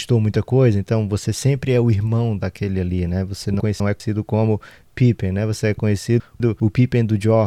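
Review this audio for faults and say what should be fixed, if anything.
Chunks out of order at 3.6–4.0 s and 6.2–6.6 s: a 200 ms chunk lands one chunk late, so the speech jumbles briefly. Reorder by sequence number or timestamp before playback or writing.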